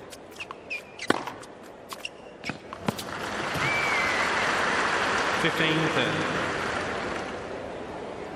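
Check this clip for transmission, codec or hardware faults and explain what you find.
One codec fault: compressed frames skipped at about 1.97 s. A short run of compressed frames never reached the output, either missing from the stream or rejected by the decoder as damaged, so playback jumps straight ahead by roughly a tenth of a second. The jump fits about four frames of around 26 ms each. At the seam the sound abruptly resumes further on.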